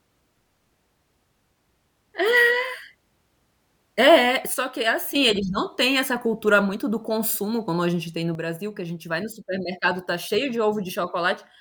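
Speech drops abruptly by about 8 dB, voice and background together, at 4.54 s (recovering at 5.15 s) and again from 8.35 s onward: a sudden gain jump, likely an unramped digital gain change.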